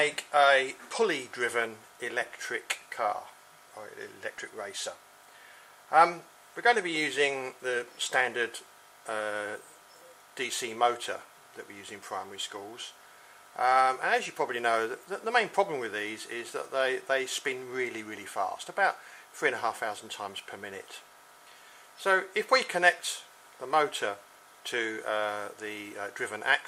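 Repeated buffers occur at 4.38 s and 10.52 s. New audio arrived late, so the device replayed its last piece, about 2.7 ms long, which fits a 128-sample buffer. It replays once at 4.38 s and twice at 10.52 s, with a hard join at each repeat. The result is a click or brief buzz, and a few milliseconds of audio are lost.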